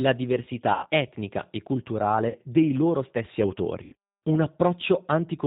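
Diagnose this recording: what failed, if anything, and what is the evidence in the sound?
The codec stage is at fault throughout. The speech has the rough, slightly synthetic texture and hard 4 kHz ceiling of a G.729 codec, here the G.729A variant at 8 kbit/s. The damage is plainly audible: sibilants and upper harmonics are gone, and the voice sounds rebuilt rather than carried. That is because the codec sends only a vocal tract filter, a pitch predictor and a few excitation pulses per short frame, not the waveform itself.

The network stage also failed, producing VoIP packet loss concealed by the speech codec at three points. From 0.74 to 0.87 s, just before "etnica e", about 90 ms of signal is missing and is replaced by a stretched continuation of the preceding sound, a buzzy tone or coloured noise that fades. From 2.29 to 2.38 s, just before "dei loro stessi", a shorter 60 ms gap sounds the same. 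From 3.83 to 3.95 s, right after "dei loro stessi", another 90 ms dropout follows. The lengths fit two or three consecutive lost packets. The decoder fills each gap by repeating its last pitch and filter at falling gain. Because each frame depends on the one before, the voice stays weak or distorted briefly after real audio resumes.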